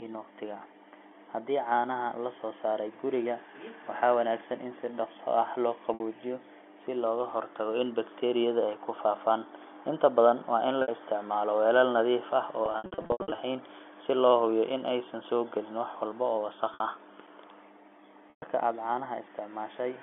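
At 5.94, 10.82 and 16.74 s there's packet loss with pitch repetition: 60 ms gaps patched by repeating the last pitch period, so you hear a brief buzzy hold. At 18.3 s a 120 ms gap fades toward silence. From 12.66 to 13.38 s the losses scatter, in runs up to 80 ms, sounding choppy over the G.711 telephone band.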